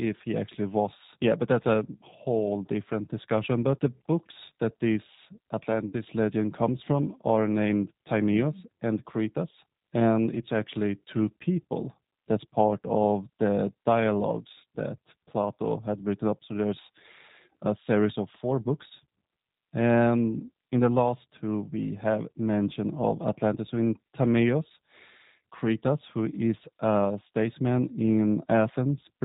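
Throughout, the speech sounds slightly rough and synthetic, with everything above 4 kHz missing. That is the G.729 codec at 8 kbit/s, whose damage is plainly audible here: it rebuilds each 10 ms frame from a vocal tract filter, a pitch predictor and a few pulses.

From 5.88 to 5.95 s, between "the books that this" and "legend comes from are", the sound smears into a fading buzzy tone or coloured noise. This is VoIP packet loss concealed by the speech codec, which fits about 50 ms, or five frames, going missing. The decoder stretched its last pitch and filter while lowering the gain.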